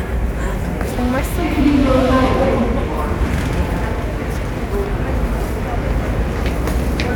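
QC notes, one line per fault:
No faults detected in this everyday-sound recording.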